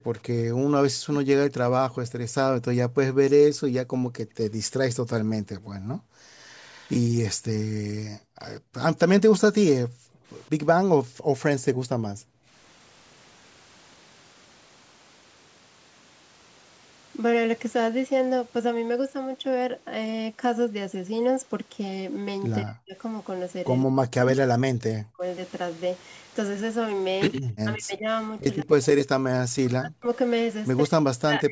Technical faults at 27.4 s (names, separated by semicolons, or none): speech suppressed in double talk; echo leak